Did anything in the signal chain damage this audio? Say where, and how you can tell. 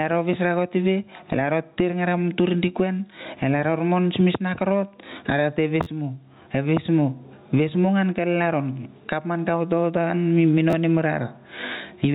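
Yes. Gain pumping runs throughout: the level ducks by about 20 dB under each loud syllable, likely excessive input gain driving a fast limiter, not slow level drift.

Repeated buffer stutters at 5.83–5.86 s and 10.70–10.73 s: a short slice replays with hard joins, fitting a 512-sample buffer of about 11.6 ms, unlike random dropout clicks.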